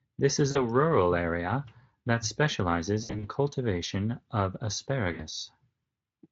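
Stretched sound, a buzzy tone or coloured noise, fading weakly at 0.51–0.71 s, before "area that specializes", then after it at 3.03–3.28 s and 5.13–5.25 s: VoIP packet loss concealed by the Speex decoder.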